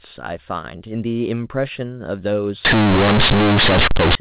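From 2.65 s to 4.15 s the speech turns into harsh, very loud, buzzy distortion: companded audio read as linear. Mu-law bytes are being played straight as plain 8-bit samples without expansion, so every sign change throws the output across roughly half its range, and quiet passages come out as loud as peaks, with heavy noise filling the gaps. Unlike ordinary clipping, which flattens only the loudest moments, this inflates the quietest parts too. Before 2.65 s, the G.711 telephone coding sounds as expected, band-limited below 4 kHz.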